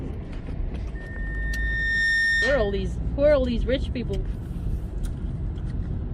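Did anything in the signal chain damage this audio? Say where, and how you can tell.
Yes: loudspeaker feedback squeal from the analogue mic-speaker loop, 0.95 to 2.94 s. A lone 1.8 kHz tone builds over about a second as loop gain exceeds one, unlike steady interference.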